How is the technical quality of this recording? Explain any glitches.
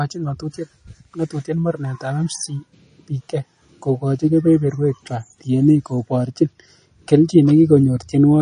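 The recording has plainly audible codec damage throughout. Across the whole clip, likely MP3 compression at a low bitrate: treble stops at 9.9 kHz, and weak frequency components flicker between frames, giving a watery, swirly texture to the speech.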